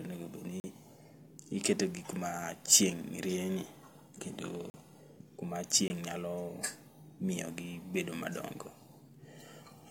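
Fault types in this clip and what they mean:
Block of digital silence: the output stream had stretches of samples dropped to zero, which points to a buffer left unfilled in time. The speech cuts to dead silence with no fade and back: 40 ms holes at 0.6 s and 4.7 s, 20 ms at 5.88 s.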